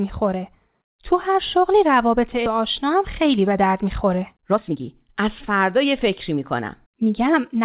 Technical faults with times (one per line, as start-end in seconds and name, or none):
2.46-2.48 skip ahead
3.01-3.66 jitter buffer speed-up
4.11-7.63 jitter buffer speed-up